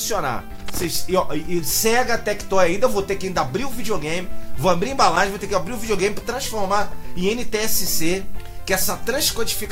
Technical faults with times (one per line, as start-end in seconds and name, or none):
0.55-0.96 loose connector crackle
5.02-5.17 loose connector crackle